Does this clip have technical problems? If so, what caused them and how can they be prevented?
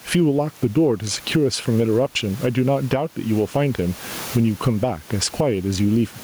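Yes. Throughout the speech the gain swings by about 15 dB, and the delivery sounds squashed, with loud and quiet syllables sitting unnaturally close together. This is gain pumping, likely caused by the input gain being set far too high with a fast limiter or compressor clamping down on each loud sound and releasing in the gaps. The room noise, about 33 dB below the speech, is a normal part of the recording and not a fault. Lowering the input gain so the limiter rarely engages, or slowing its release, would prevent it.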